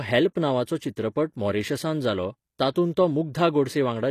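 Throughout this speech clip the treble has a gritty, metallic quality. The s sounds come out lispy and the upper band stops dead near 14.9 kHz. The likely cause is HE-AAC compression at a low rate, around 24 kbps. The codec keeps only the lower spectrum and fills the top by copying lower bands upward. That is why the brightness survives while its harmonics fail to line up with those below. Plain low-pass filtering would sound dull instead.

From 2.72 to 2.76 s, just after "नांवाचो चित्रपट मॉरिशसांत जालो", a brief hiss of about 36 ms runs ahead of a sharp attack, and the onset sounds softened. This is pre-echo. The transform block spreads its quantisation noise evenly, so noise sized for the loud attack also fills the quiet moment before it. Unlike a click or dropout, it leads the transient rather than interrupting it.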